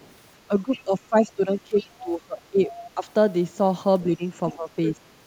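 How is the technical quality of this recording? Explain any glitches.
The recording has two echo-cancellation faults.

Other side's voice leaking through, at 0.0–0.13 s, 0.76–0.81 s, 1.8–2.1 s, 4.5–4.54 s and 4.87–4.92 s: the echo canceller likely left loudspeaker playback in the microphone, so faint-to-moderate scraps of a second voice surface.

Speech suppressed in double talk, across 0.48–3.06 s and 4.07–4.97 s: with both sides talking, the canceller likely attenuated everything, so the talker's voice dips by up to roughly 15 dB in patches.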